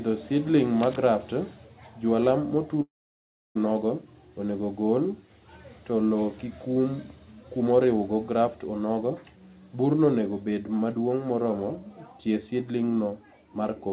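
From 0.80 to 0.96 s, cable scratch noise lays a dense, uneven crackle over the speech at roughly 10 dB below it, likely from a worn cable or connector being moved. On a spectrogram it shows as ragged broadband streaks, and in the waveform as spiky, irregular fuzz.

At 2.82 s a long network dropout begins. The last sound is stretched into a brief fading buzz, then about 0.67 s of silence follows before the speech resumes at 3.57 s, with that stretch lost, likely through packets that never arrived. The waveform goes flat, and the spectrogram shows a short smeared tail and then blank space, all within the band that stops at 4 kHz, which fits a 64 kbps G.711 call.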